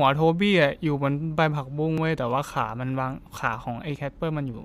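At 1.98 s and 3.96 s, the speech skips. Overlap between stream segments at each 2-second boundary cuts away 8 and 12 ms.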